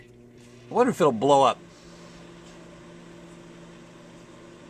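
No technical faults can be heard in this audio.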